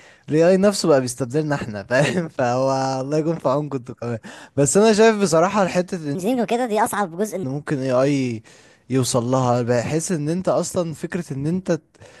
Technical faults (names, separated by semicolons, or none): section at the wrong speed